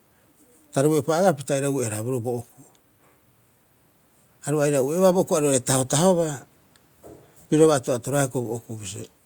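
No technical faults are audible.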